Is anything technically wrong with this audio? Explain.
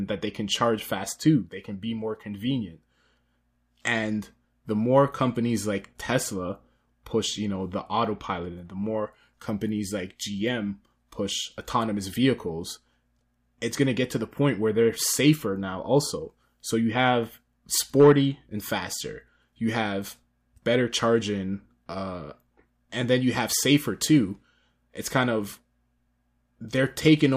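No, nothing technically wrong can be heard in this speech recording.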